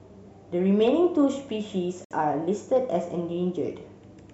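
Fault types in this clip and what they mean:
Gap between stream segments: The timestamps of two consecutive stream segments don't meet, and the player fills the space between them with silence. Here a hole of about 62 ms opens at 2.05 s and closes at 2.11 s, cutting the speech abruptly at both edges. Its position fits a boundary between segments of roughly 2 seconds. Nothing is missing from the speech itself; the remaining audio is simply pushed later by that gap.
Hard clipping: A stage in the chain received a signal larger than it could pass, so the waveform's peaks were sliced off flat. The overdrive is slight, about 1 dB, and brief, at 2.76 s, so only the very tops of one loud moment in the speech are flattened. The squared-off peaks add high harmonics, heard as a short crackle rather than a sustained harsh fuzz.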